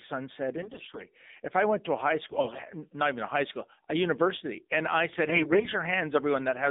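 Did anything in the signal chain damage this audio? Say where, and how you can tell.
Yes. The whole clip sounds thin and boxed-in, with a buzzy, synthetic edge on the speech and nothing present outside roughly 200 Hz to 3.7 kHz. That points to the codec stage: the AMR narrowband mobile codec, AMR-NB, at a low mode, which fits a bitrate around 7.4 kbps. Its 8 kHz sampling removes everything above 4 kHz, and at so few bits the pulse-driven vocal-tract model can only approximate the voice, leaving plainly audible synthetic buzz.

Three short stretches turn hoarse, scratchy and gargly while pitch and loudness stay broadly intact: 0.58 to 1.04 s, 2.28 to 2.62 s, and 5.24 to 5.69 s. This is AMR bit errors, a network-stage fault. Over a weak link, the less protected bits in each run of frames arrived flipped, at a rate of roughly one in ten in the first burst and a little lower in the others. 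The checksum on the key bits still passed, so the decoder played the damaged frames. Their excitation pulses landed in the wrong places, and the fine gain and spectral values were corrupted.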